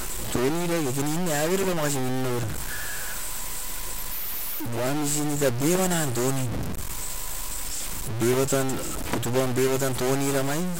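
A speech recording with a harsh, buzzy grit riding on it from start to finish, and the pauses between phrases never go clean; they fill with a steady noise instead. That pattern is most likely a stuck bit, one data bit pinned high or low somewhere in the converter or wiring, so about half the samples land wrong by a fixed step of roughly -25 dBFS. Because it's that high a bit, the hiss in the gaps is fairly loud.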